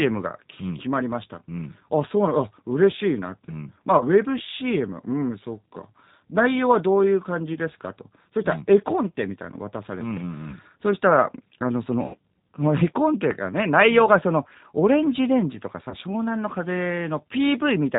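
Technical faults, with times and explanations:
Throughout: G.729 codec, at 8 kbit/s, plainly audible. Speech is rebuilt from a vocal-tract filter, pitch predictor and a few pulses per frame, so it sounds rough and slightly synthetic with nothing above 4 kHz. Unlike simple low-pass filtering, the texture itself is artificial.
3.98–4.04 s, 7.54–7.59 s, 10.50–10.54 s, 12.06–12.17 s, 15.89–15.95 s: VoIP packet loss concealed by the speech codec. Each gap of about 20 ms (80 ms at 12.06 s, fitting several consecutive lost packets) is filled by extrapolating the last pitch and filter, giving a brief buzzy or noisy, fading smear rather than a silent dropout or click. Speech stays weak or distorted just afterwards as the decoder recovers.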